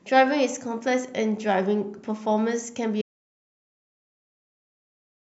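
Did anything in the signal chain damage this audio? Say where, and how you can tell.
Yes. At 3.02 s the speech stops dead and the rest of the clip is silent, with no room tone at all. That's an audio dropout to silence, likely the input link or device dropping out while the recorder kept writing silence.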